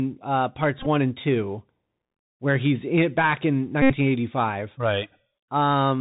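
A speech recording carried over a Bluetooth CVSD headset codec for its whole length. Nothing above 4 kHz gets through, so the sound is narrowband and muffled. The one-bit delta coding leaves a grainy hiss under the voice, and s sounds come out scratchy where loud high-frequency energy outruns the adaptive step size. The damage is plainly audible and fits a 64 kbps CVSD link. There are also two Bluetooth headset packet repeats, where lost voice packets were replaced by decoding the previous packet's bits again. From 0.79 to 0.87 s, just before "and two", the repeats are scattered across about 68 ms, with the longest run roughly 15 ms. From 3.82 to 3.94 s, right after "he's in back in", a continuous 75 ms dropout, which points to about twenty consecutive lost packets, repeats every 3.75 ms and produces a steady buzz near 267 Hz until good packets resume.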